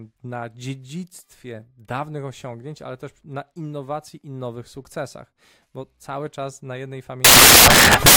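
Samples built from the wrong bytes, from 7.25 s to the end: misassembled bytes push fast-changing low bits into each value, turning the speech into loud, harsh broadband noise.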